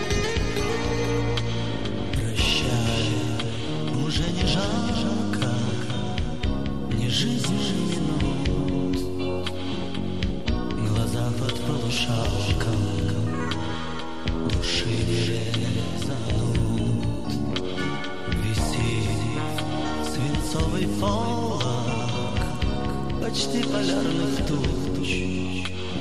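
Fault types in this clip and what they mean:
Doubled audio track: a second full-band copy of the sound trails the original by about half a second all the way through, about 5 dB quieter and with no decay or room colour. That makes it a hard, clean repeat rather than an echo, likely from a slower second capture path.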